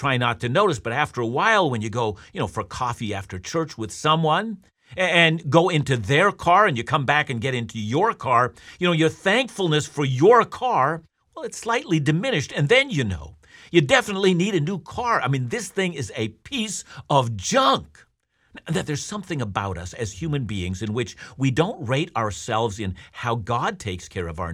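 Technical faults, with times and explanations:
Nothing stood out on listening to this speech recording.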